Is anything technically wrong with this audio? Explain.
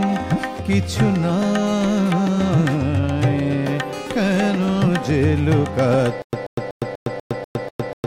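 Yes. From 6.22 s to the end, a stutter with silent gaps: a 134 ms burst repeats seven times every 244 ms with 110 ms of digital silence between, likely a stalled stream replaying its last fragment. The dead gaps distinguish it from a seamless loop stutter.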